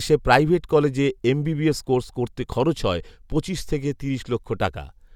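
Nothing in this recording stands out as a technical fault, so there's no problem to point to anywhere along the way.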